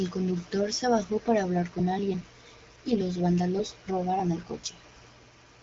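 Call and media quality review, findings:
No faults found; the speech is band-limited with nothing above about 7.4 kHz, consistent with the AMR wideband (HD Voice) codec working normally at a rate that fits 12.65 kbit/s.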